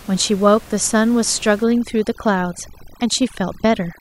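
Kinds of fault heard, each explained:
Overdone noise removal: from about 1.63 s to the end, the background drops and breaks up into twinkling, warbling specks. A noise reduction stage is set too aggressively, pushing individual frequency bands far down or off whenever they sit near its noise estimate. The room noise, about 23 dB below the speech before this point, drops away into those specks, and the quieter parts of the speech are stripped away with it.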